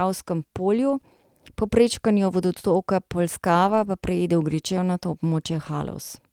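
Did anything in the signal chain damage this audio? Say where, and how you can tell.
Yes. The damage comes from the network, concealed at the codec stage: lost packet rebuilt from error correction, three times in this speech. The spans are 0.89 to 0.91 s (20 ms), 2.27 to 2.33 s just after "po prečkanju" (40 ms), and 3.63 to 3.85 s just before "pa preide" (120 ms). There is no dropout. Each span sounds briefly rougher and grainier because the decoder played the low-bitrate backup copy carried in the following packet. On a waveform there is no gap or flat line. On a spectrogram each span shows as a blurred, noisier patch with smeared harmonics.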